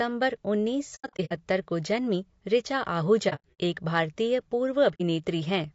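Throughout, the speech has a rough, grainy texture, with noise filling the gaps between the voice's harmonics and a thin, somewhat synthetic top band. That points to low-delay AAC compression, likely AAC-ELD at a low rate of around 32 kbps. Its short frames resolve pitch harmonics poorly, and at this rate the damage is plainly audible. Because the grain is steady rather than tied to moments, it is the codec itself, not a transmission problem.

AAC frame loss with muting appears at 0.95 to 1.33 s, where about 240 ms of audio is lost in scattered gaps over 360 ms, the longest roughly a tenth of a second. It recurs at 3.29 to 3.58 s, with about 180 ms missing over 300 ms and again a longest run near a tenth of a second, and at 4.94 to 5.01 s as a single 60 ms gap. In each case the decoder zeroed the missing frames, so the overlapping windows fade the sound smoothly out and back in. What separates these from dropouts or clipping is the soft-edged holes.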